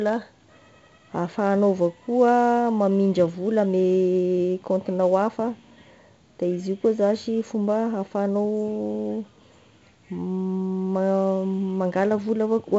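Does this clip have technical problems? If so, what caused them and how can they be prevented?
Yes. 4-bit ADPCM compression affects the whole speech clip. Each sample is coded as a coarse step from a prediction, so a gritty hiss rides on every loud passage and sharp onsets distort where the step size lags. Nothing is heard above 7.8 kHz, which fits a 16 kHz sample rate and a 64 kbps stream. To prevent it, record and store the speech as linear PCM or with a modern higher-quality codec at a higher sample rate.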